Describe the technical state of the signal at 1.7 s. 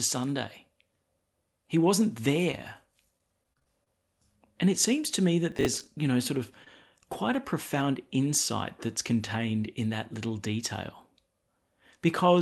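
At 1.7 s the speech is intact, with no dropout, click or distortion, and only the ordinary band limit of the call path, with nothing above about 12 kHz, is present.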